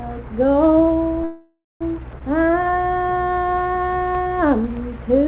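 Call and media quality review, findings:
Call audio freeze, 1.24 to 1.83 s: sound stalls for about 0.57 s, the last moment stretched into a fading buzz or hiss, then roughly 0.2 s of silence before playback resumes where it stopped, with nothing lost. Likely cause: delayed packets draining the jitter buffer, with concealment extending the final frame.

Skip ahead, 2.19 to 2.22 s: abrupt forward jump joined by a very short fill of about 16 ms, with roughly a fifth of a second of audio gone. Stretch of audio dropped in transit or by the jitter buffer while later audio was already queued.

Jitter buffer slow-down, 2.37 to 4.70 s: playback drags at 91% speed with pitch unchanged, sounds drawn out, 210 ms added overall. Buffer rebuilding its reserve by repeating single pitch periods and pause fragments. G.711 mu-law path audible throughout as a band limit at 4 kHz.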